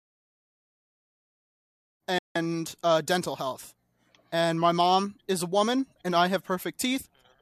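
Speech clip with a digital broadcast dropout from 2.18 to 2.36 s, between "women's reproductive health" and "uh dental health". The receiver muted with a 3 ms fade for about 170 ms, consistent with roughly seven lost or corrupted frames. The audio sent during that gap is gone. The level also ramps up smoothly from about 2.0 to 2.05 s.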